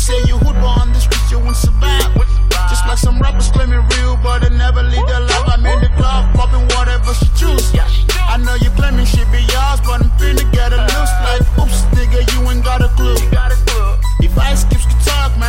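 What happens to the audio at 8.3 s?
Nothing goes wrong at 8.3 s; the audio carries straight through that moment without any dropout, click, glitch or other fault.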